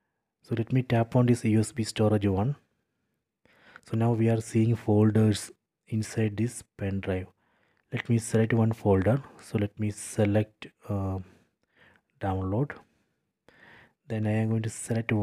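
No technical faults can be heard in this recording.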